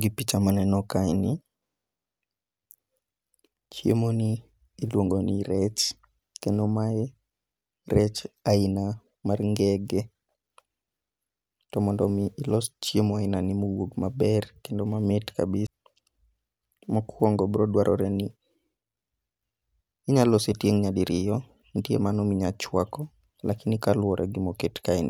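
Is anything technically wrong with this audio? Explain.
Yes, there is a CD skip at 15.67 s, just after "kendo mamit". A knock or a surface flaw threw the player's laser off its track and onto another turn of the disc's spiral. The player muted for a moment, around 15 ms, and then resumed from that other turn. The speech is cut by a short gap, and playback picks up at a different point, a jump of whole disc revolutions rather than a smooth continuation.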